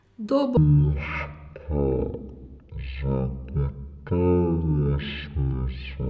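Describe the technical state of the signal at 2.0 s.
At 2.0 s the signal is inside a wrong sample rate fault that runs from 0.57 s to the end of the clip. The samples are being played back without conversion at a third of their intended rate, which fits a 48 kHz recording played at 16 kHz. Speed and pitch fall together. The speech runs at about one third of normal pace and sits roughly 19 semitones lower, so it sounds slow, drawn out and very deep.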